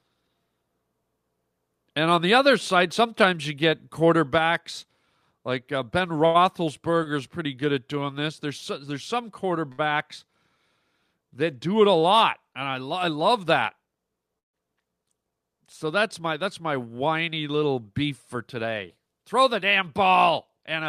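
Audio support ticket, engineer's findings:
Short stall from a late packet, 6.25–6.40 s. Held sound stretched about 91 ms, slight buzz. Jitter buffer ran dry waiting on a late packet; receiver extended the last audio, then resumed at the same point, nothing dropped.
Same stall, 7.03–7.08 s, just before "good at doing". Roughly 25 ms hold, subtle drag.
Same stall, 9.72–9.81 s. About 63 ms of stretched sound.

Jitter buffer speed-up, 13.29–13.97 s. Speech runs about 8% fast, pitch unchanged, hurried feel. Buffer over target after delayed packets bunched up; receiver trimmed pitch-period slices repeatedly, around 70 ms total.
Same speed-up, 18.09–18.97 s, right after "that's my whiny little". About 6% fast, again roughly 70 ms trimmed.

Call audio freeze, 14.39–14.56 s. Last sound carried on briefly, then about 140 ms of silence; roughly 149 ms inserted overall, nothing lost. Likely packets held up in transit, jitter buffer empty; playback resumed where it left off.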